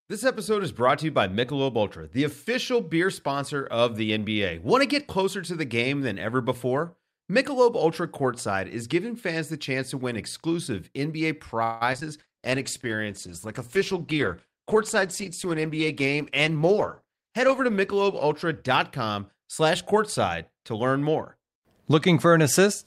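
From 11.63 to 12.03 s, packets went missing again and again, causing repeated packet loss with a robotic sound. Across four gaps, about half the span was patched by extending the previous sound, and the longest gap lasted 175 ms. The speech turns choppy, with about 60 ms simply absent.

At 12.21 s a call bitrate drop begins. The encoder's budget falls from 64 to 16 kbps and stays at its lowest for about 5.5 s before recovering by 19.90 s. The coarser coding makes the speech rough and watery, and the top end sounds dulled.

Within that stretch the jitter buffer twice held too much audio and trimmed short pitch-period pieces to catch up. This jitter buffer speed-up runs at 109% from 15.45 to 15.86 s and at 107% from 16.39 to 18.01 s, cutting a few tens of milliseconds and then about a tenth of a second. The speech sounds hurried at unchanged pitch.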